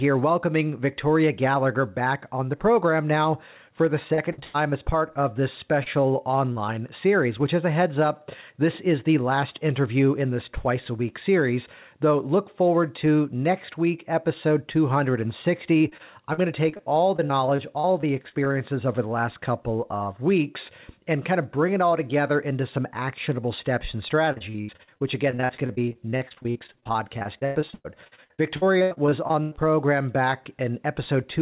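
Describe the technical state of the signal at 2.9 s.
At 2.9 s the audio is intact, with nothing at fault beyond the normal telephone-band sound of the call path, which carries nothing above 4 kHz.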